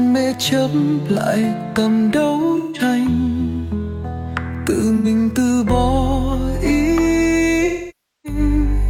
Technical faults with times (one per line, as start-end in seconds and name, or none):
2.57-2.81 AAC frame loss with concealment
4.97-5.07 AAC frame loss with concealment
7.65-8.39 AAC frame loss with concealment